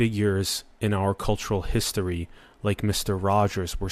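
No technical faults can be heard anywhere in the speech.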